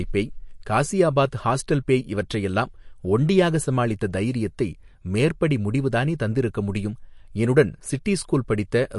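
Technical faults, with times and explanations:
Throughout, MP3 compression: nothing remains above 11.3 kHz, and the coding damage to the speech is plainly audible, likely from MP3 encoding at a low rate, which fits roughly 49 kbps. Short of bits, the encoder drops the treble band wholesale at a fixed cut-off and discards the weaker frequency lines it judges inaudible, so the upper range of the speech is missing and the remaining detail is coarsely rebuilt.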